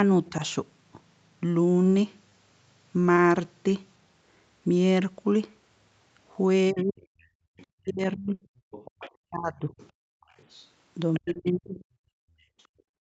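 At 0.26 to 0.30 s the other side's voice leaks through: a faint scrap, roughly 30 dB under the talker, likely echo the canceller missed. Unlike packet loss, it is a second voice rather than a smear.

From 0.30 to 0.43 s the talker's speech is suppressed in double talk: a shallow dip of a few decibels, likely while both sides overlap. It lowers the voice itself, not the room.

Short concealed packet loss follows at 2.29, 3.15 and later 11.33 s. Each time, 20 ms of missing audio is filled by extending the last sound. The result is a brief smear or wobble, too short to become a buzz.

From 6.71 to 11.8 s double-talk suppression returns much harder. The talker is pushed down as far as about 40 dB across roughly two seconds in pieces, likely the canceller ducking both sides.

From 7.05 s to the end, the other side's voice leaks through at about 20 dB under the talker.

From 7.27 to 10.28 s the background is gated by the echo canceller. 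The room tone drops by up to about 37 dB for around half a second in total. What disappears is the ambience rather than the talker, which separates this from double-talk suppression.

At 8.33 to 8.43 s a burst of packet loss leaves 80 ms concealed. The last sound is held and fades, and speech resumes further on with that stretch missing.

From 12.08 s to the end the background is gated again, dipping by about 36 dB. All of this sits on Opus coding limited to 8 kHz.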